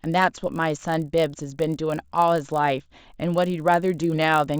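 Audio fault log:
throughout: resampler restarted on every block. There's a steady 50 Hz buzz riding under the speech that drops out in the gaps. It sounds like a 16 kHz to 48 kHz conversion done on 20 ms blocks, each handled on its own. At every block edge the converter lacks the real neighbouring samples, so it leaves a tiny glitch there. At fifty glitches a second, the ticks merge into a buzz that only shows up while there's signal.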